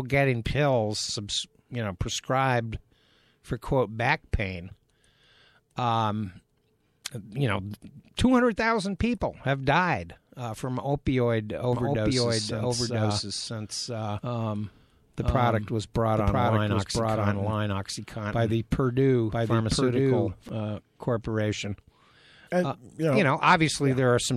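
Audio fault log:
11.73–20.49 s, doubled audio track: the speech is joined by a second copy of itself running about a second behind and at roughly the same loudness, so every phrase is heard twice, the repeat landing over whatever is said next. The copy is dry and full-band, with no decay or room colour, and it cuts in and out abruptly at each end of the range. That points to the same signal likely being mixed in twice, once through a slower path.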